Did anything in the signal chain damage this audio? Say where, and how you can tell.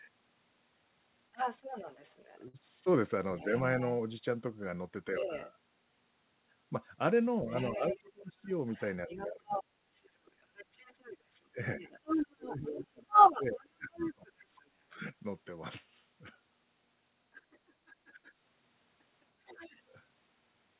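Yes. A second voice, the other side's voice leaking through, sits under the talker from 1.32 to 5.53 s at about 5 dB below, from 7.50 to 14.70 s at roughly equal level, and faintly from 17.34 to 19.83 s. This happens in call processing: the echo canceller likely left loudspeaker pickup in the microphone signal.

A burst of packet loss hits at 2.48 to 2.57 s. The sound smears into a held, fading tail for about 56 ms, then jumps ahead with about 60 ms missing. This is a network fault: lost or late packets were concealed by extending the last audio, then skipped.

The talker's own voice drops out while the other side speaks, which is speech suppressed in double talk. There is a shallow dip at 5.20 to 5.31 s, deep cuts of about 25 dB across 7.43 to 9.89 s and 11.54 to 15.01 s, and about 20 dB at 17.88 to 18.28 s. The echo canceller likely attenuated both voices when it couldn't separate them.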